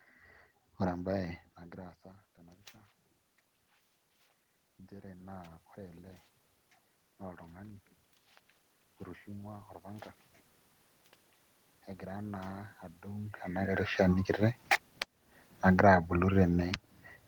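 At 1.6 s the speech level drops sharply when the talker moves away, by about 21 dB, and automatic gain rising follows: the gain climbs about 4 dB over the next 1.1 s, to 2.74 s, so voice and room noise swell together. The gain rises the same way from 4.89 to 6.11 s, again about 4 dB against a 21 dB drop in input level. From 15.07 to 16.21 s the gain rises about 6 dB, lifting the background with the voice.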